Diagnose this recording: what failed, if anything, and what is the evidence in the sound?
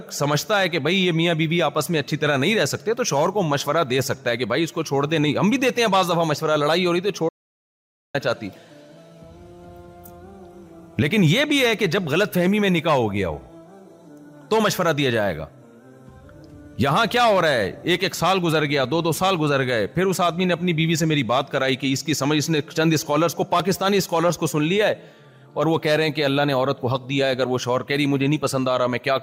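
At 7.29 s the sound cuts out mid-flow into silence, with no room tone at all, and comes back at 8.14 s. That's an audio dropout to silence of about 0.85 s, likely a lost input link while the recorder kept writing zeros.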